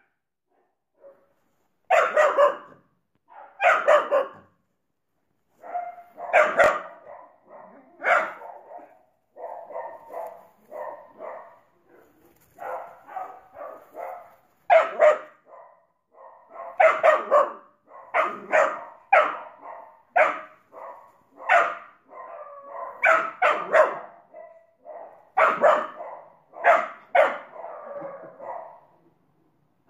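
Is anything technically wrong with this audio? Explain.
Yes. From 6.64 to 6.68 s there is a brief jumbled stutter. These are chunks out of order: one 20 ms chunk arrived late and was played one chunk after its proper place, so the two swap and leave hard seams.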